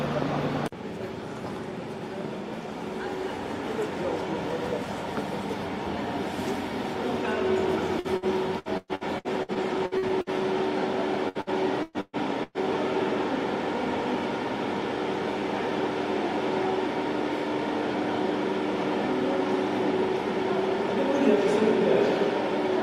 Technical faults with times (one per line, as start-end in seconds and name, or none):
7.99-10.30 repeated packet loss (robotic sound)
11.29-12.58 repeated packet loss (robotic sound)